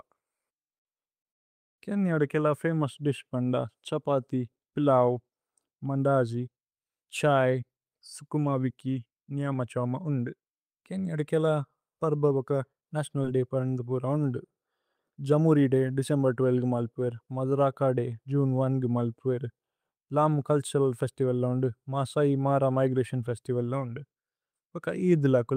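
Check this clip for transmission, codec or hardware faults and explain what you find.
Three kinds of transmission fault are present in this speech clip.

From 1.31 to 1.79 s the speech drops to 0.47 s of silence before "കേന്യദ കേല ഫമോഉസ് ദിശ്". This is likely a call audio freeze. Delayed packets emptied the jitter buffer, and the speech resumes where it stopped.

A jitter buffer speed-up occurs four times: 7.46 to 10.36 s at 109% (ending before "കേന്യദ കേല"), 12.07 to 13.36 s at 109%, 15.16 to 16.41 s at 104%, and 20.79 to 21.13 s at 110%. The receiver trims pitch-period slices to shed excess delay. Speech hurries at unchanged pitch.

At 13.23 s, just before "ദയ് പരന്ദ പുര", there is a short concealed packet loss. About 10 ms never arrived and was filled by extending the preceding sound, leaving a tiny smear.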